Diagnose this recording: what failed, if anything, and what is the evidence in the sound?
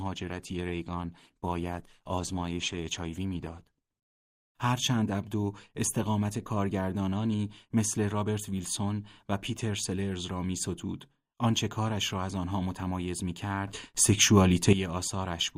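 Two failures, at different stages. The first is at the codec and network stage, an adaptive stream starting at a low bitrate. For the first 4.0 s the speech is narrowband and smeared, with thin, swirly treble and stronger codec artefacts, which fits an Opus stream near 16 kbit/s. At 4.0 s it turns clear and full-bandwidth, consistent with about 64 kbit/s, with no gap or dropout. A bandwidth-limited microphone or a filter would stay dull throughout, but here the quality steps up once, seamlessly, after the player had gauged the connection.

The second is a sudden gain jump, most likely a digital gain change in the playback or processing chain applied without a ramp. At 13.67 s the speech and the background noise leap up together by about 11 dB, stay there, and drop back at 14.73 s. A talker moving closer or a compressor would change the level gradually and leave the noise floor mostly unchanged. 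This change is instantaneous and lifts everything equally, which points to a digital gain step.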